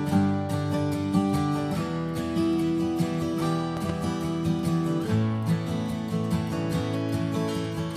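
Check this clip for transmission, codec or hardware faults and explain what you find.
There's one fault, a loud pop. At 3.77 s a double pop lands well above the level of the sound, the second following quickly and the pair over by 3.92 s, with the audio carrying on underneath. That's likely a voltage spike from a switch, plug or static, shaped by the downstream circuitry.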